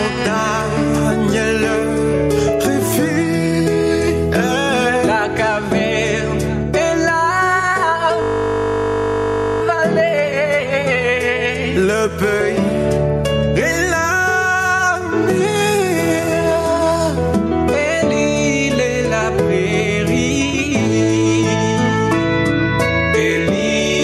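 The whole recording has gain pumping, with the level swinging by roughly 10 dB. That's most likely a mic gain set far too high with a fast limiter clamping down on the peaks. Then from 8.22 to 9.62 s there's a system hang loop, where one 20 ms slice repeats about 70 times. At that length it comes across as a steady 50 Hz buzz rather than a stutter, and it sounds like the driver froze while the hardware kept cycling its buffer.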